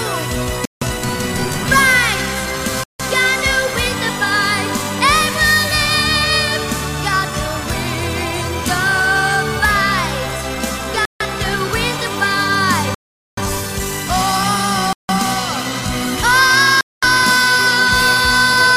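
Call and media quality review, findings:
Bluetooth stall, six dropouts at 0.65, 2.84, 11.05, 12.95, 14.93 and 16.81 s: hard cuts to silence, mostly about 0.15 to 0.16 s, longest 0.43 s at 12.95 s. Likely interference delaying packets, headphone buffer running dry until retransmissions arrive.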